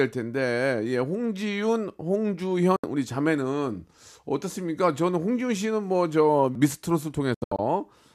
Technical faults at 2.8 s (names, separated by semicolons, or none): digital broadcast dropout